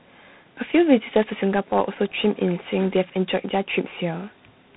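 From the first syllable to the end you can hear tandem speech coding: the roughness points to two speech coders in a row, likely CVSD then G.726 at 24 kbit/s, each re-coding the other's damage. It's muffled, with nothing above 3.9 kHz.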